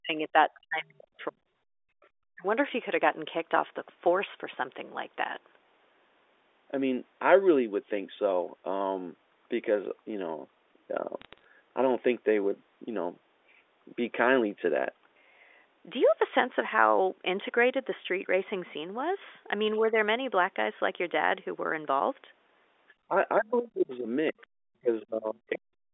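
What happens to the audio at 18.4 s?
Nothing goes wrong at 18.4 s; the speech there passes intact through the telephone-band line, with no dropout, click or distortion at that moment.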